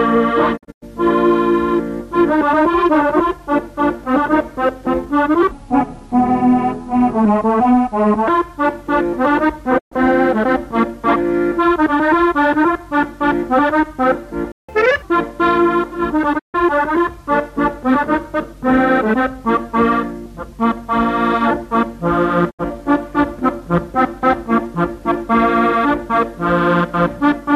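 At 0.56 to 0.84 s a digital broadcast dropout mutes the audio in several short holes, each with a 20 ms fade. The holes total 168 ms, the longest 96 ms, scattered over 240 ms. The waveform shows flat gaps, and the spectrogram shows blank vertical bands.

From 5.51 to 8.28 s the section plays at the wrong speed, 0.722 times normal, dropping roughly five semitones. It sounds deep and sluggish. The likely cause is the player or an edit running it on the wrong clock. On a spectrogram the whole harmonic pattern shifts downward and stretches in time.

Another dropout at 9.77 to 9.93 s silences 120 ms behind quick fades.

At 14.52 s a playback stall stops the sound mid-flow for 168 ms, likely because the player ran out of data. The waveform shows an abrupt flat line.

Catch-up at higher speed follows from 14.69 to 15.02 s at 1.5 times, about seven semitones sharp, to recover the delay. It sounds briefly hurried and chipmunk-like. 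The spectrogram shows compressed, upward-shifted harmonics.

Further dropouts mute 144 ms at 16.37 to 16.56 s and 72 ms at 22.49 to 22.61 s. Their losses fit 24 ms frames.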